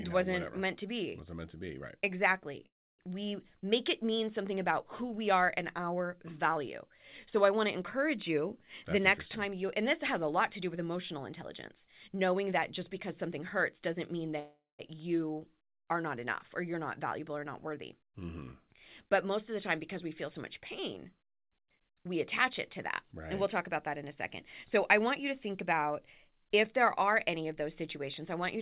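At 2.66 s the speech stops for about 0.33 s, mostly silent. This is a call audio freeze, likely from delayed packets emptying the jitter buffer. Nothing is lost.

From 9.0 to 14.39 s, a jitter buffer speed-up plays the speech at 105% with pitch unchanged. Roughly a third of a second of tiny pitch-period slices is trimmed to reduce the backlog.

A second freeze follows at 14.39 s and lasts about 0.39 s.

More speed-ups come after "are not enough or" (16.73–18.39 s, 105%), after "of the time because" (20.03–24.0 s, 104%) and after "a second" (24.77–28.39 s, 104%). The first of these sounds slightly hurried. Through all of it, the G.711 call path leaves nothing above 4 kHz.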